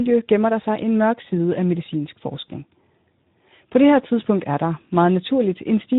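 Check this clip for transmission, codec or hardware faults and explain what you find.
One codec fault runs throughout. Speex codec: the CELP coder has too few bits for its excitation, so the speech sounds plainly noisy and hoarse, consistent with roughly 11 kbps.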